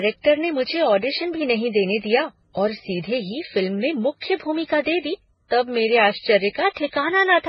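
Transcoding between lossy codecs runs throughout the speech. Nothing survives above 5.6 kHz, and layered swirling, smeared artefacts overlap. The likely cause is a chain of low-bitrate MP3, then HE-AAC, then Vorbis, each re-encoding earlier damage while keeping the lowest cut-off.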